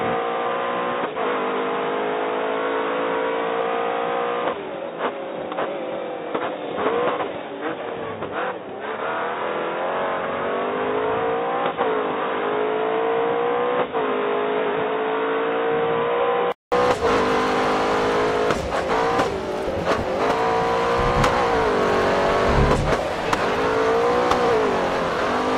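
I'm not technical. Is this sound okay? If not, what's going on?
No. From the start until 16.72 s the sound is dull and boxy, with nothing above about 3.8 kHz, and it is a little quieter, with a faint background noise of its own. At 16.72 s there's a gap of about 0.2 s, then the sound turns clear and full. The likely cause is an input switched to a poorer device. A sudden jump with a short gap sets this apart from a tone-control setting, which would dull the sound steadily throughout.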